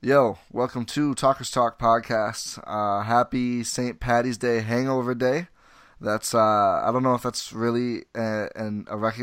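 No technical faults can be heard anywhere in the speech recording; the signal stays continuous and intact throughout.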